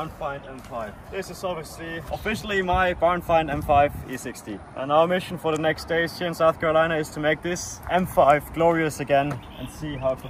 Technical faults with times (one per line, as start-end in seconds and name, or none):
none